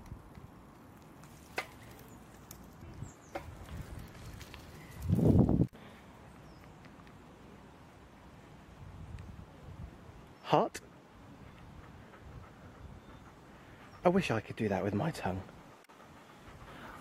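No technical faults are audible.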